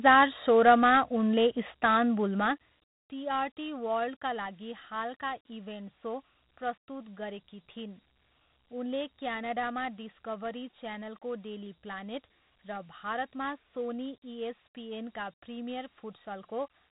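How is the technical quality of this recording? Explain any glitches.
The recording has audible technical flaws: a gritty, band-limited phone-system texture throughout and a brief zipping artefact early on.

Across the whole clip the speech sounds thin and grainy, with a hiss clinging to it and nothing above about 3.9 kHz. That is Dialogic VOX ADPCM: 4-bit adaptive coding at a low sample rate, consistent with roughly 32 kbps, which cuts the top band and leaves plainly audible quantisation grit.

From 2.26 to 3.03 s, just before "टिआरटी वर्ल्डका", a fast ticking buzz rides on the sound as the level drops by about 15 dB. This is zipper noise: the gain moved in a few hundred unsmoothed steps a second, each step clicking.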